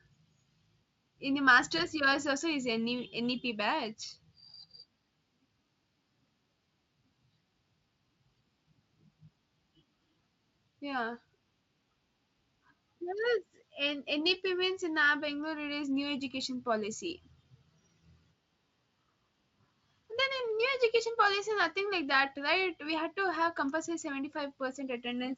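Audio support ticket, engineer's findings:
VoIP packet loss concealed by the speech codec: packets dropped at 1.77–1.82 s, just before "yours also is", and 17.42–17.46 s, each fitting one lost 20 ms frame. Speex decoder extrapolates prior pitch and filter at fading gain, causing brief stretched, fading smear and weak recovery.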